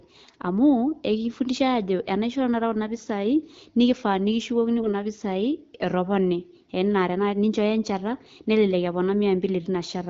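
AMR bit errors hit this wideband speech clip from 4.78 to 4.88 s, a burst spanning a few 20 ms frames. Flipped low-priority bits, perhaps a few percent, misplace excitation pulses and skew fine pitch, gain and spectral values, so the sound briefly turns hoarse and gargly while roughly holding pitch and level.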